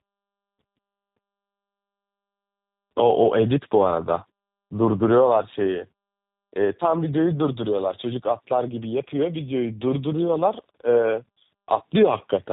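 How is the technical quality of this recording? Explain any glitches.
The quality is poor all the way through, because of a single persistent fault.

Tandem speech coding affects the whole clip. The audio seems to have crossed several telephone links, each decoding and re-encoding it, with the rough signature pointing to a CVSD stage and then a G.729A coder. Each pass compounds the last one's damage, leaving speech rough, muffled and warbly, with nothing above 3.8 kHz.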